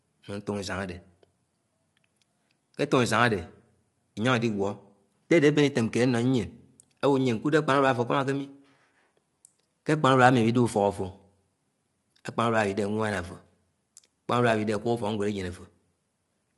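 Low-delay AAC compression runs throughout, from start to end. The speech sounds plainly coded: rough and grainy, with nothing above 11.6 kHz. The likely cause is AAC-ELD, the low-delay codec used in video calls, at a rate that points to around 32 kbps. Its short analysis frames separate the voice's pitch harmonics poorly and spend bits quickly, so detail between harmonics gives way to noisy texture and the top band is cut.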